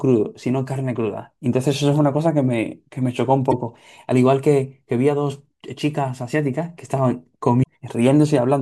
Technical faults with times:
3.51-3.53 damaged data in a compressed stream
7.60-7.65 damaged data in a compressed stream

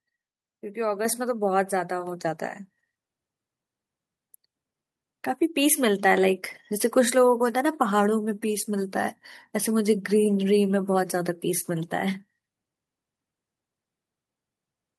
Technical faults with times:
1.05 microphone volume stepped up

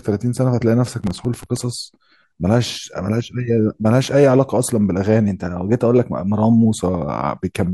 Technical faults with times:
1.01-1.57 processor overload crackle
5.28-6.65 drift correction step

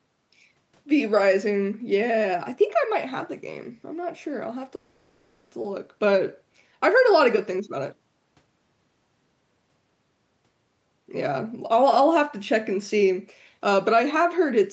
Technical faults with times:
4.75-5.53 long network dropout

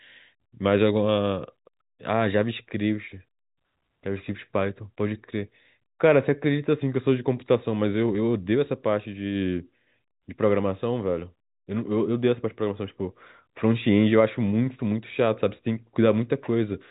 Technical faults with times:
none

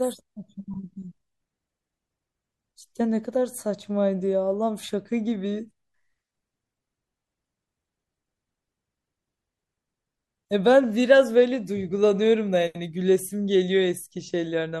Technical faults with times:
0.00-14.80 MP3 compression

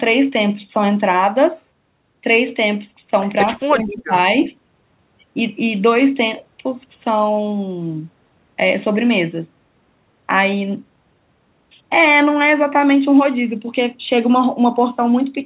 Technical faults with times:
3.56-4.13 speech suppressed in double talk

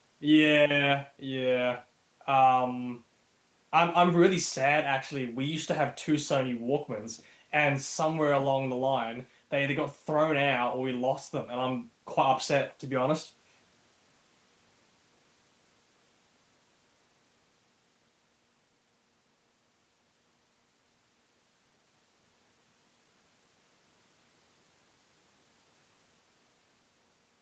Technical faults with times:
none

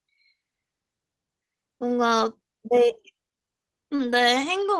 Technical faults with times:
2.19-2.21 lost packet rebuilt from error correction
3.95-4.01 short concealed packet loss
3.99-4.21 lost packet rebuilt from error correction

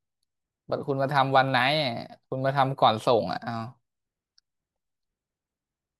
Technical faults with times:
none

